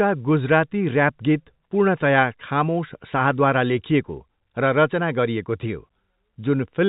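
No technical faults are audible.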